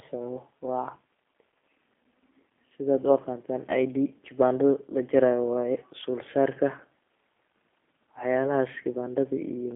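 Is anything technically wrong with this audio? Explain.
Yes. The speech carries G.729 codec damage for the whole clip. The band is held between about 300 Hz and 3.5 kHz, so the bottom and all the air are gone. The codec does not keep the waveform. It rebuilds each 10 ms frame from a vocal tract filter, a pitch guess and a few pulses, which fits an 8 kbit/s G.729A stream. The result is plainly rough and synthetic.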